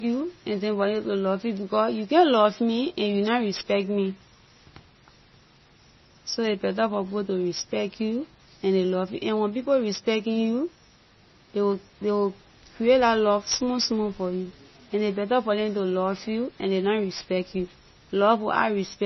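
From start to finish the speech has nothing above about 5.9 kHz, and it has a watery, swirly texture with chirpy, metallic sibilants and smeared attacks. That's likely heavy MP3 compression; the encoder clearly ran short of bits and dropped the treble, which fits a very low bitrate somewhere around 24 kbps.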